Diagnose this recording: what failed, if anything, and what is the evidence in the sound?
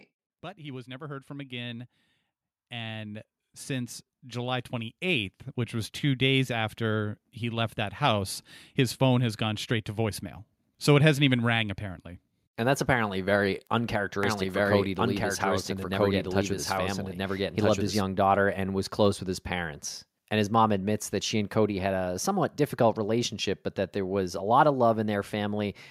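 Automatic gain rising from 0.55 s to 12.1 s, in call processing: the speech and its background swell together by about 16 dB over roughly eleven seconds. The gain control judged the input too quiet and kept raising its gain step by step.

Doubled audio track from 14.23 s to 18.01 s, ending just before "daughter and was close": a second full-band copy at about the same level trails by around one and a half seconds, dry and without decay. It starts and stops abruptly, likely from a slower duplicate capture path or an out-of-step edit.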